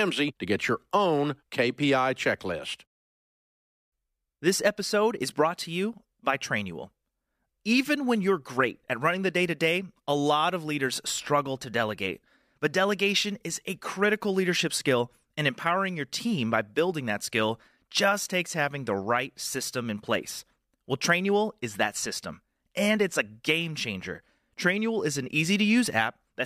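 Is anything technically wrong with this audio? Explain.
No, nothing here sounds technically off to me; it's an ordinary recording of speech without any audible problems.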